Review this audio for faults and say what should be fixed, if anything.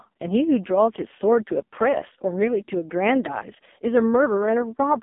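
The whole clip has gone through an AMR narrowband mobile codec, so the speech sits in a thin phone band from about 200 Hz to 3.6 kHz with nothing above. The damage is heavy: the voice sounds buzzy and synthetic, which points to the lowest AMR-NB mode, around 4.75 kbps, where the vocal-tract model and its pulses get too few bits. To prevent it, record or route the speech over a wideband path instead of a mobile call.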